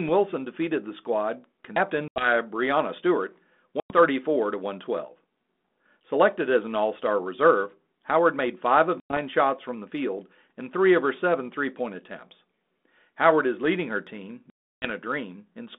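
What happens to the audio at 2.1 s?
Packet loss on an ADPCM call hits from 2.08 to 2.3 s. About 80 ms of lost packets becomes hard-edged silence, a flat gap in the waveform and a blank band on the spectrogram. With predictor and step size out of step, speech resumes slightly distorted.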